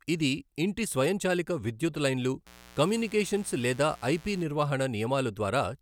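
From 2.47 to 4.43 s, just after "ఇంటి స్వయంచాలిక విధ్యుత్ లైన్లు", a steady, raspy buzz sits roughly 25 dB under the speech. This is mains buzz: sharp switching spikes on 60 Hz mains, entering through a dimmer, rectifier or missing shield, spread harmonics up into the kilohertz range.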